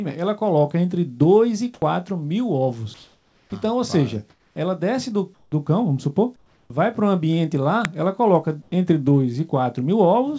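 At 1.18 to 1.22 s there is a brief smear as about 20 ms of missing audio is bridged: short concealed packet loss, where the receiver extended the previous sound and blended back into the real signal.

Starting at that same moment and running to 1.82 s, the background turns flat and featureless. This is likely comfort noise in place of the background, with synthetic noise standing in while transmission paused.

Between 2.94 and 5.52 s the sound turns choppy. The likely cause is sound chopped by the voice detector, which repeatedly switched sending off and on.

From 6.36 to 6.70 s the background drops by about 7 dB into a smooth hiss, with the background sitting about 40 dB below the loudest passages. This is again likely comfort noise replacing the real background.

At 7.85 s a loud, sub-millisecond crack cuts through. It comes from an uninitialised buffer, whose leftover memory was played as audio, and its length fits a 32-sample block.

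From 8.62 to 8.72 s the background briefly becomes featureless and about 1 dB quieter, once more likely comfort noise standing in for it. Throughout, the G.722 call path leaves nothing above 8 kHz.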